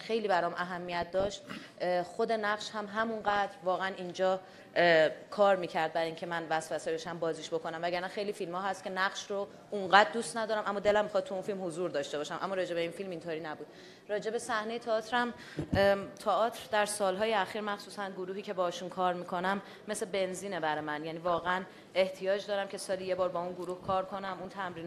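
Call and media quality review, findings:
DAB burbling, bubbly noise blips at 0.6–1.6, 2.9–3.5, 6.6–7.1, 10.85–10.95, 21.3–21.6, 24.0–24.5 s. Weak reception lets bit errors through, so MP2 sub-bands get short noise blips.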